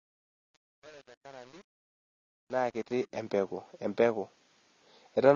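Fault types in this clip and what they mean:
AAC compression: The speech sounds dull and smeared throughout, with a warbling, fizzy texture, likely from low-bitrate AAC-LC at around 24 kbps. A spectrogram shows nothing above 7 kHz, and the upper bands look blotchy, with holes or patches of substitute noise.
truncation distortion on a fade: The fade-in from 0 to 3.22 s sounds gritty, worst from 0 to 2.99 s, because the gain stage keeps too few bits and adds no dither, which fits an 8-bit path. The waveform shows coarse square steps instead of a smooth rise.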